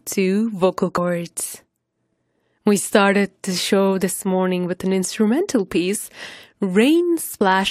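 At 0.96 s and 7.40 s, compressed frames are skipped: missing 23.2 ms frames make the speech jump ahead, seen as a spectrogram discontinuity.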